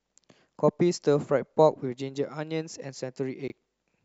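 At 3.48 to 3.52 s, two 20 ms chunks of the speech are out of order: one arrived late and plays a chunk after its successor. The brief jumble has three hard joins, seen as waveform discontinuities and thin vertical broadband lines on a spectrogram.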